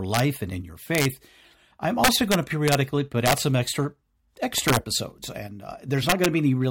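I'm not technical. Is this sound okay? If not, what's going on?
No. The recording system hits an integer overflow: when the speech gets loud, the numbers storing it run past their limit and wrap around to the opposite extreme. You hear harsh cracks at 0.14–0.20 s (before "and in your"), 0.95–1.05 s, 2.04–2.75 s (the longest), 3.26–3.33 s (before "some extra"), 4.58–4.77 s and 6.09–6.26 s.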